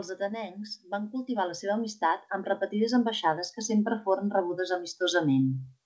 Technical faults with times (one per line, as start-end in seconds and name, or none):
0.17-3.53 automatic gain rising